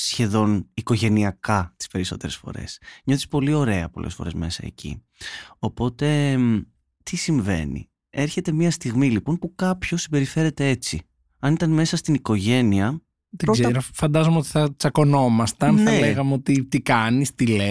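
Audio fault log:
No faults heard in this speech.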